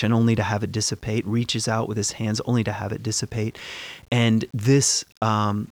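Throughout the speech, grainy distortion tracks the signal, likely low bit depth without dither: rounding to 8 bits leaves error around 35 dB down that, unlike steady hiss, vanishes in silence and roughens quiet syllables.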